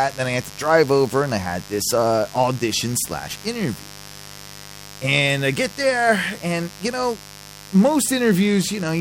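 A speech recording with mains buzz running from start to finish, a steady, raspy buzz sitting roughly 20 dB below the speech. It is built on a 50 Hz mains fundamental, with a dense stack of harmonics extending well up into the kilohertz range, which gives it an edge rather than a pure hum. That spectrum comes from sharp switching spikes arriving twice per mains cycle, the sort of interference a dimmer, a rectifier or an unshielded cable lets into the signal path.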